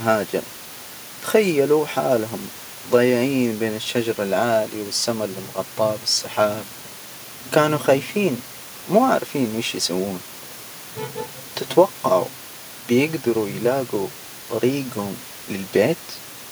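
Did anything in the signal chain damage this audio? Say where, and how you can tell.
No, nothing in the signal chain has damaged this speech, and the only thing beneath it is a room noise sitting about 22 dB below the voice level, which belongs to the space the microphone was in rather than to any stage of the chain.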